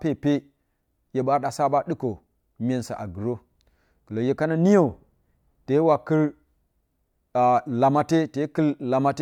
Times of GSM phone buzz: none

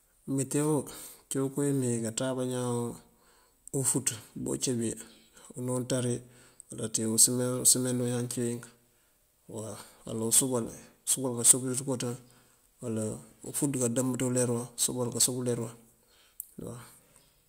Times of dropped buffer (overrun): none

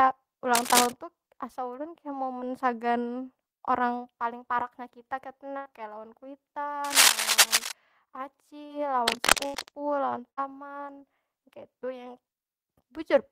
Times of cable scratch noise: 0.54-0.94, 6.84-7.72, 9.08-9.69

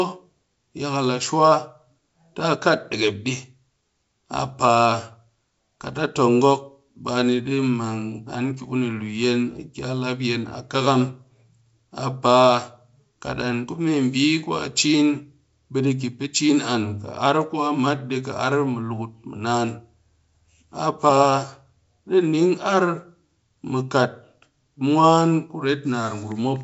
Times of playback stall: none

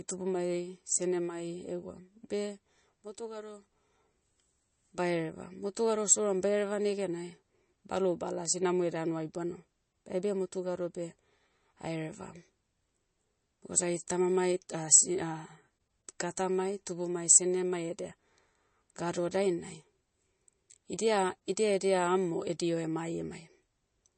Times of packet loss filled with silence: none

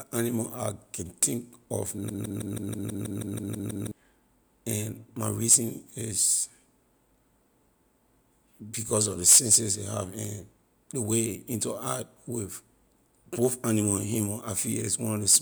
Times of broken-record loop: 2.09-3.91

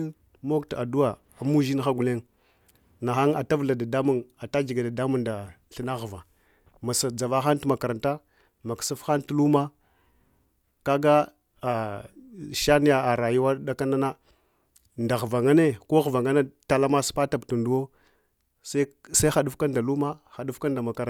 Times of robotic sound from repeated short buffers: none

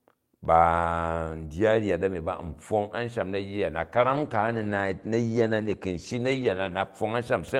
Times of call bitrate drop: 3.82-6.95

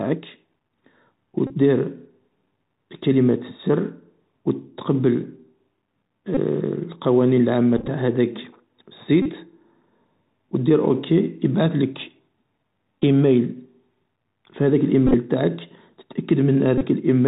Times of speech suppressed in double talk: none

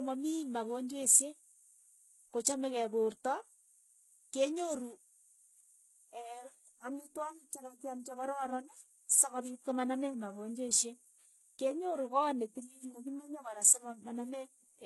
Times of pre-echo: 9.09

